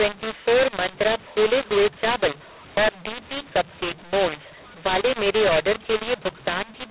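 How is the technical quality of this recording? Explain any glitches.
Poor. The speech sounds harsh and gritty from start to finish, and the pauses fill with hiss instead of falling silent.

Across the whole clip, this is a mu-law and A-law mix-up: telephone audio coded as A-law was decoded as mu-law, so levels get scrambled and the quietest samples are pushed well above silence. The G.711 telephone band limit, with nothing above 4 kHz, can also be heard.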